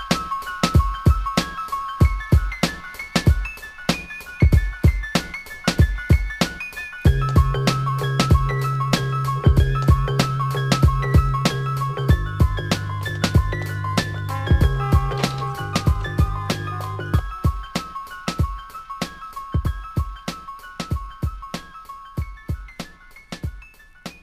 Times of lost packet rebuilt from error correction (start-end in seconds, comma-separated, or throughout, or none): none